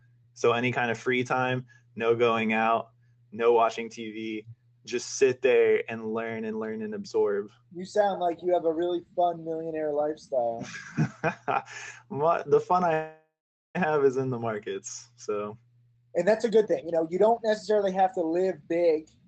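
A call audio freeze runs from 12.93 to 13.77 s, most likely because packets were held up and the jitter buffer ran dry. The receiver extended the last sound into a fading buzz that sinks into silence for about 410 ms of the 0.81 s gap. When delivery resumes, the audio picks up exactly where it stopped, so nothing is lost, but everything afterwards arrives about 0.81 s later than before.

A jitter buffer speed-up follows from 15.82 to 18.99 s, as the receiver works off that extra delay. It repeatedly cuts out short slices, one or a few pitch periods long, removing around 0.7 s in total. The pitch stays where it was, but the audio plays at roughly 126% speed and sounds noticeably rushed. Throughout the clip, the top of the audio band stops around 8 kHz, which fits an Opus call path.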